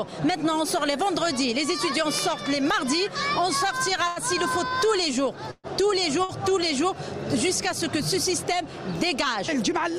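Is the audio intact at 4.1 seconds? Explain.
No. From 4.07 to 4.19 s there is a short stall from a late packet. A packet arrived late, the jitter buffer emptied, and the receiver held the last sound for 87 ms before resuming where it left off. Nothing is lost, only drawn out with a faint buzz or dip. That is why it reads as a stretch rather than a dropout gap.

Running through that moment are word clock ticks, present from 0.71 s to the end at roughly 0.7 s intervals. Two unsynchronised digital clocks differ by around 30 parts per million, so a single sample slips at each crossing. The result is brief sharp ticks that recur evenly, unlike the one-off smeared hold of the stall.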